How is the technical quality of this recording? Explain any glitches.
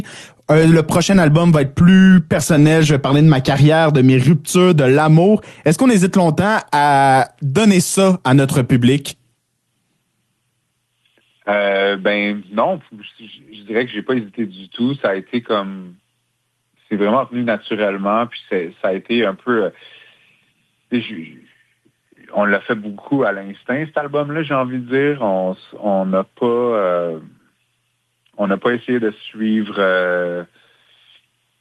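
No glitches can be heard in this recording.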